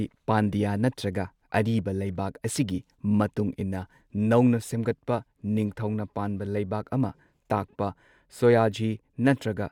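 Speech recording; no technical faults can be heard.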